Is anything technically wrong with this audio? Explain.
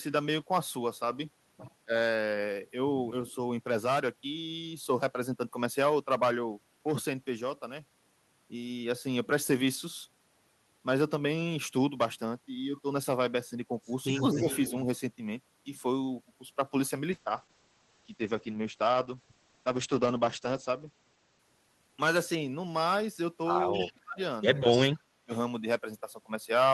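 Yes, three kinds of fault occur.

Speech suppressed in double talk at 1.85–1.92, 14.33–14.73, 23.72–24.20 and 24.73–25.32 s: the echo canceller, likely confused by both sides talking at once, turns the talker down. The speech dips by about 15, 10, 35 and 40 dB respectively.

Echo leak at 3.28–3.32, 14.15–14.70, 23.74–23.92 and 24.70–24.78 s: a loudspeaker-side canceller likely let some echo through. A 237 ms delayed copy returns, about 30 dB below the speech at first and about 15 dB below later.

Call bitrate drop from 17.13 to 22.73 s: the encoder rate falls from 32 to 9 kbps for about 3.5 s, and bandwidth narrows from 20 kHz to 8 kHz. The speech sounds rough and muffled.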